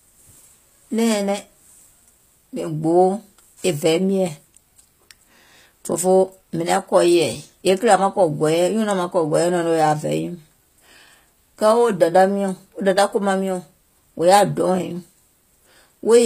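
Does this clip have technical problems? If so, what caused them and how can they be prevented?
Yes. Throughout the speech, the treble is plainly damaged: bright but gritty and metallic, s sounds lispy, and nothing above 15.4 kHz. Likely cause: HE-AAC compression, fitting about 24 kbps, which copies lower bands upward to fake the treble, misaligning harmonics. Encoding at a higher bitrate with plain AAC prevents this.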